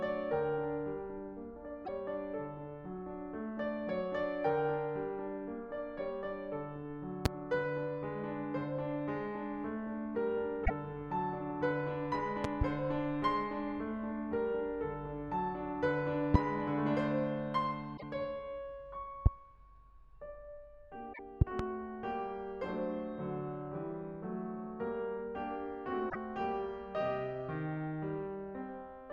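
It's a music track with two problems running through it. There's damaged data in the compressed stream at 1.82–1.89, 10.62–10.70, 17.93–18.03, 21.10–21.19 and 26.06–26.15 s, each a short glitch of under a tenth of a second, where the decoder hit bad frames, lost sync and hunted for the next header. On top of that there are loud pops, single ones at 7.26–7.28, 16.34–16.37 and 19.26–19.29 s and double ones at 12.44–12.64 and 21.41–21.62 s, jumping out roughly 20 to 25 dB above the music while it carries on underneath, likely from voltage spikes such as a plug, a switch or a driver glitch.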